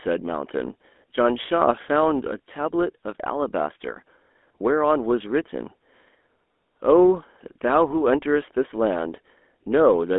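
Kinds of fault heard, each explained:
GSM full-rate codec: The speech has passed through the original GSM mobile-phone coder, which rebuilds the voice from a model of the vocal tract driven by a sparse, regularly spaced pulse excitation, at a rate that fits 13 kbps. Throughout the clip this gives a plainly audible buzzy, gravelly roughness, within a band from 250 Hz to 3.5 kHz. Plain telephone band-limiting would sound thin but clean; the grit woven into the voice marks this codec.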